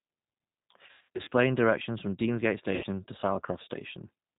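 G.729 codec damage runs throughout: this 8 kbit/s coder rebuilds the speech from a vocal tract filter, pitch predictor and sparse pulses, so it sounds rough and synthetic, with nothing above 4 kHz.

VoIP packet loss concealed by the speech codec occurs from 0.87 to 1.32 s and again from 2.75 to 2.87 s. The decoder extrapolates from its last pitch and filter over the missing audio, about 280 ms scattered across 440 ms with runs up to 100 ms, then 80 ms. This leaves fading buzzy or noisy stretches and weak, distorted sound as it recovers.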